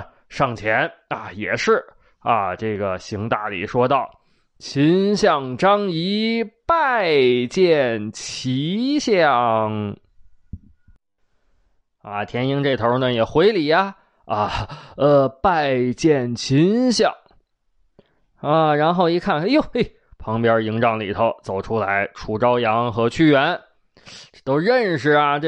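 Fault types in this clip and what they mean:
Drift correction step: from 12.13 to 12.73 s and from 18.53 to 19.32 s the speech runs about 5.9% fast and rises nearly a semitone, then snaps back, likely a clock-matching resampler briefly changing playback rate to rebalance its buffer.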